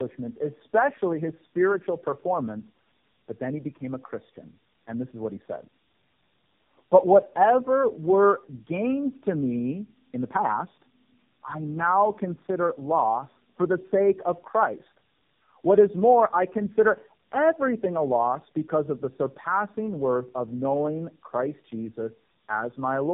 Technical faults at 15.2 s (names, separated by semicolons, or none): tandem speech coding